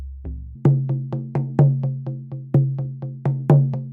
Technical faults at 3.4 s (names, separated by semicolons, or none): audio read two samples at a time (double speed)